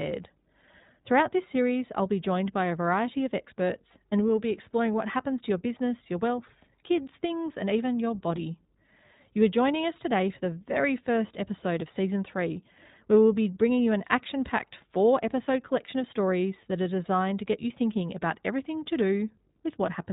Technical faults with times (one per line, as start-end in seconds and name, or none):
0.00-20.12 iLBC codec